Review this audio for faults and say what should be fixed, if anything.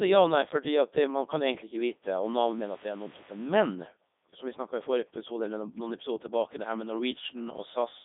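The speech path runs through a Codec 2 vocoder for the whole clip, at a quality that fits its top 3.2 kbit/s mode. Instead of carrying the waveform, the codec sends only pitch, voicing, energy and a coarse spectral envelope, and the decoder rebuilds the voice from sine waves. The result is heavily damaged speech that sounds robotic and buzzy, squeezed into a narrow line band of about 250 Hz to 3.7 kHz with nothing above 3.8 kHz. To prevent it, capture or route the source over a waveform-preserving wideband path rather than a low-rate digital-radio vocoder.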